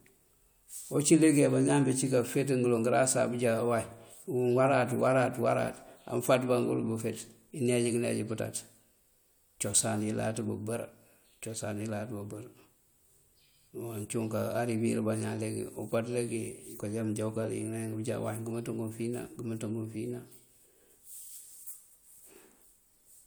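No technical faults are audible anywhere in this speech recording.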